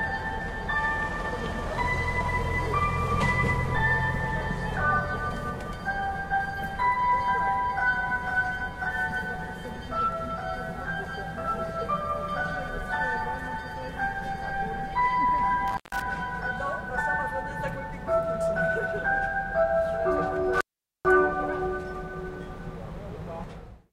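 Intermittent contact: a loose connection briefly opens the line at 15.68 to 16.02 s, for about 0.15 s, and again at 20.53 to 21.05 s, for about 0.44 s. Each time the sound drops out with crackle at the edges and faint hiss in the gap.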